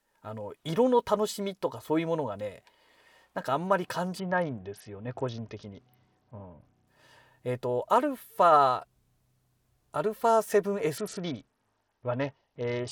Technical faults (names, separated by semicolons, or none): Bluetooth SBC bit pool drop